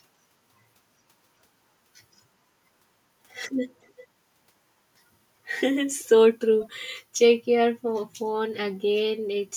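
A faint, delayed copy of the speech surfaces three times in this speech clip: from 3.83 to 4.07 s, from 5.99 to 6.08 s, and from 6.61 to 6.65 s, each a short scrap trailing the original by 375 ms and sitting well below it, roughly 25 to 35 dB down. This is an echo leak, likely from a far end on loudspeaker whose echo canceller let brief fragments of its own microphone pickup slip back into the call.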